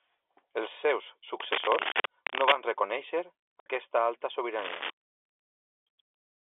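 Cable scratch noise runs from 1.40 to 2.54 s and again from 4.59 to 4.90 s: dense, uneven bursts of scratching and rustling sit over the speech at roughly the same loudness, likely from a worn cable or connector being moved so its contact resistance jumps rapidly.

Packet loss filled with silence cuts a hole from 1.92 to 1.94 s, inside the first scratch, and a longer one from 3.60 to 3.66 s. The gaps fit one and then two lost 30 ms packets replaced by silence, leaving hard-edged holes in the telephone-band (G.711) audio.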